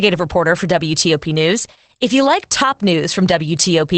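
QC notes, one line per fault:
Throughout: Opus voice compression. The speech is muffled, hoarse and faintly robotic, with nothing above about 8.7 kHz. This fits the SILK linear-prediction mode at a wideband setting, near 12 kbps. The coder rebuilds the voice from a predicted spectral envelope and a coarsely coded excitation, which gives the grainy, buzzy edge. A plain low-pass filter would dull the top but leave the voice's texture clean, and MP3-style coding would instead add swirling, watery high-frequency artefacts.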